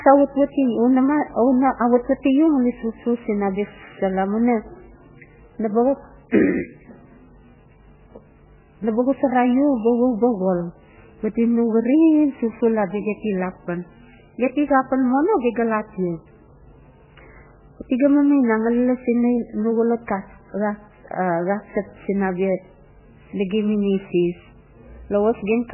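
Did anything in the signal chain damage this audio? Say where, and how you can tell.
Yes. Throughout the speech, nothing survives above 3 kHz and the sound is watery and swirly, with smeared consonant attacks. That likely points to heavy MP3 compression at the codec stage, fitting a bitrate near 8 kbps. A spectrogram shows a flat ceiling at 3 kHz with flickering, patchy holes below it.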